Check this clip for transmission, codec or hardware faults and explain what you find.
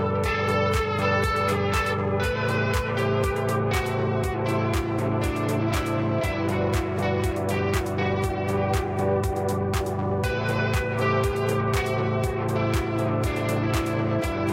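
No faults detected.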